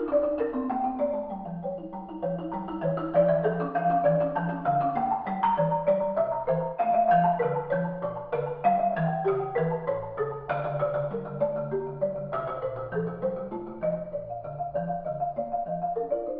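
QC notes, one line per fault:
No faults to note.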